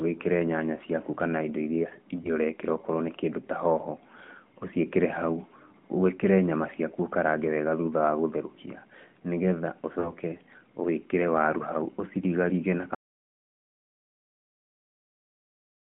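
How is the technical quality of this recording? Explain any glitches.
Three glitches stand out in this speech recording, which comes through a narrowband phone path. The band runs roughly 150 Hz to 3.4 kHz, and the light coding texture points to AMR-NB at its top rate of around 12.2 kbps.

Lost AMR speech frames: At 2.22–2.32 s, right after "ciaku kana indo irĩa", there's a brief warbly dip, which fits a single lost 20 ms frame. At 10.00–10.14 s it's a longer smear, more like two frames, about 40 ms. Each time, radio errors failed the frame checks, and the decoder filled in by reusing the last good pitch and vocal tract settings at lowering gain. That makes the sound stretch oddly and then come back a bit rough.

Audio dropout to silence: From 12.95 s the sound cuts out mid-flow and stays dead to the end. It's silence, with no room tone at all, so the input was gone while silence kept being written. 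The likely cause is a lost link, a disconnected device or a stray mute. Whatever came after that point simply isn't in the file.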